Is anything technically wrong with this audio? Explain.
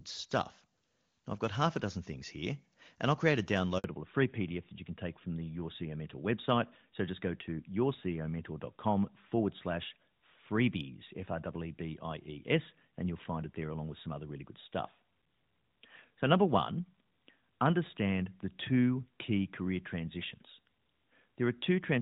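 Yes, there are two faults. The first is a handover gap from 3.78 to 3.84 s. While the call switched networks, no speech frames arrived for 60 ms, so the sound dies out abruptly and whatever was said there is lost. A waveform shows a flat silent notch, and a spectrogram shows a thin blank vertical stripe.

The second is a fallback to narrowband, starting at 3.84 s and lasting to the end. Before this point the HD Voice codec sounds clean, consistent with a high wideband rate. Afterwards the call runs on an older narrowband codec, which fits AMR-NB at 12.2 kbit/s. Everything above 4 kHz disappears, so the speech turns duller and rougher. A spectrogram shows the energy suddenly cut off flat at 4 kHz.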